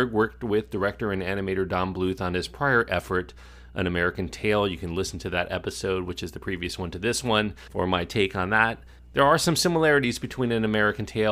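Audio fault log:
Throughout: mains hum. A steady low tone at 60 Hz sits under the speech at about 25 dB below it, with some low harmonics above it. The power line is leaking into the signal, most plausibly through a ground loop or a nearby transformer. On a spectrogram it shows as a thin, unbroken horizontal line at 60 Hz with weaker parallel lines above. In the waveform, pauses between phrases carry a small regular ripple instead of flat silence.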